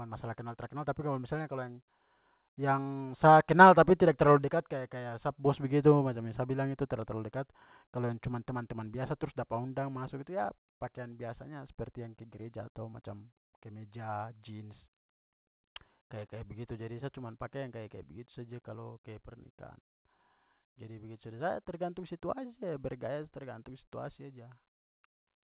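Speech carried over a narrowband call path with nothing above 4 kHz, which fits a G.711 mu-law link, and no fault present.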